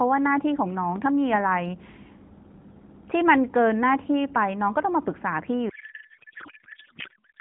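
At 0.96 s there's a single loud pop, a sharp click lasting about 35 ms that peaks around 5 dB above the speech, with the speech carrying on underneath. It sounds like a sudden voltage step or pulse hitting the line, likely from a plug, switch, static discharge or driver glitch, with the downstream circuitry rounding it off into that one brief thump.

From 5.7 s through to the end, the speech turns into garbled, warbling noise that barely tracks what was being said. That's a codec payload misread. The decoder is taking well-formed frames but reading their fields from the wrong bit positions, which fits octet-aligned AMR being unpacked as bandwidth-efficient. Before that point the narrowband AMR sound is intact, with nothing above 4 kHz and only light codec colouring, consistent with the 12.2 kbps mode.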